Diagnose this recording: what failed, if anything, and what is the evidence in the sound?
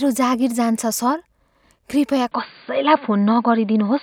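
From 2.32 s the speech turns dull and boxy, with nothing above 4.7 kHz and a level shift of about 5 dB, likely because the input switched to a poorer device at the driver stage.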